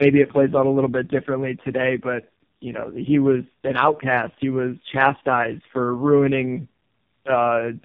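Speech, and across the whole clip it carries tandem speech coding: it sounds like the call was squeezed through two low-rate narrowband speech coders in a row, with a plain telephone-grade hop between them, which fits AMR-NB at around 5.9 and then 5.15 kbit/s. The second coder re-encodes the first one's already-damaged output, so the roughness, muffling and warbly smearing stack up. Nothing survives above 3.6 kHz.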